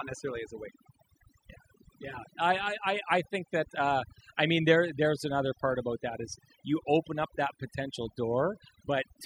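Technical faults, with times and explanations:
Throughout, overdone noise removal: over-aggressive reduction gates bands near the noise floor, leaving near-silent gaps with twinkling specks, and spectrograms showing scattered isolated blobs.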